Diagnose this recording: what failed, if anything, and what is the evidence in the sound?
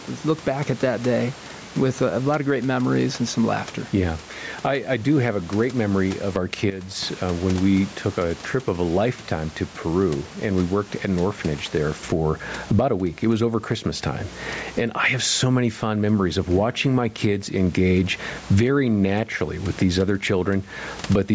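Gain pumping runs through the whole recording, with a gain swing of around 15 dB. The likely cause is microphone gain set far too high, with a fast limiter in the call processing clamping every peak.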